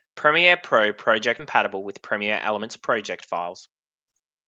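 A skip ahead at 1.39 to 1.41 s drops about a second of speech. Audio was dropped, on the way or by the jitter buffer, while later audio was already waiting, so playback lurches forward and the two sides are butted together with no gap or fill.

Jitter buffer speed-up follows twice: from 1.65 to 2.80 s at 117% speed, trimming roughly 200 ms, then from 3.40 to 4.43 s at 111%, trimming about 100 ms. The buffer held more audio than its target, so the receiver repeatedly cut out pitch-period-sized slices. The speech sounds hurried but keeps its pitch. Throughout, the Opus coding noise and the high frequencies ending around 8 kHz are what a call link of roughly 32 kbps would produce.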